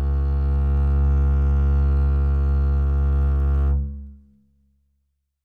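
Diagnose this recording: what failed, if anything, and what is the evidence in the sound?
Nothing in the music points to a failure at any stage of the chain. No event in the sound calls for a diagnosis.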